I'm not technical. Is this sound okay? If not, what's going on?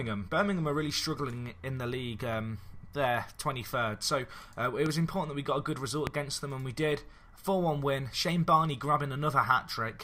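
No. There are two loud pops, at 4.86 to 4.89 s and 6.07 to 6.09 s, the second stronger. Each is a single thump over the sound, which carries on underneath, unlike a dropout, where sound goes missing. The likely cause is a sudden electrical jolt.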